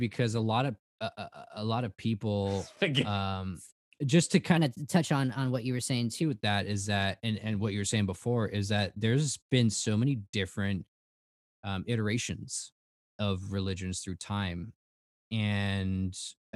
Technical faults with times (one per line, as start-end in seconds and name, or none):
4.57-6.22 section at the wrong speed